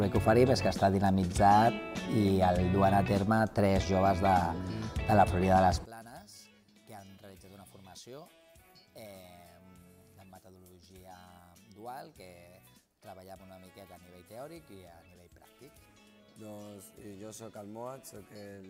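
From 5.85 s to the end, the summed sound drops by about 26 dB and turns faint. The likely cause is one channel inverted: with one stereo channel's polarity reversed, material common to both channels cancels in mono, so only their difference survives.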